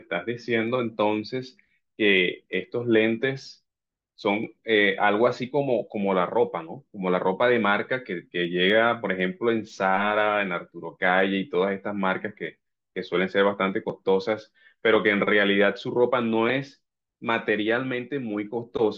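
From 0.18 s to 18.73 s, faint ticks land about every third of a second through the speech, around seventy in all. Those are clock slip clicks, likely from two unsynced clocks slipping one sample each time. The spacing suggests roughly 100 ppm drift.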